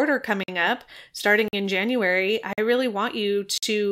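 A speech clip with a gap between chunks: four hard-edged silent holes of about 48 ms at 0.43, 1.48, 2.53 and 3.58 s, the first just before "up starting in", the second right after "up starting". They recur every 1.05 s, consistent with 1-second chunks each followed by inserted silence.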